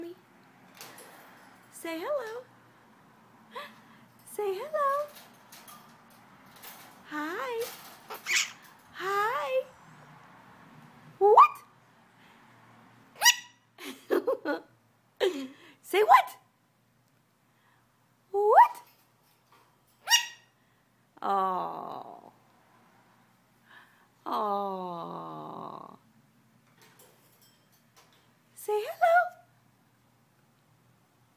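Nothing in the audio stood out as a technical problem on listening.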